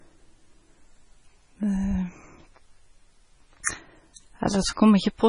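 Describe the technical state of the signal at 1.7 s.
At 1.7 s the speech shows heavy MP3 compression damage, present throughout. It is likely a starved encoder, around 24 kbps, zeroing weak bands, so it sounds watery and smeared. A spectrogram shows a hard ceiling at 10.5 kHz and flickering holes.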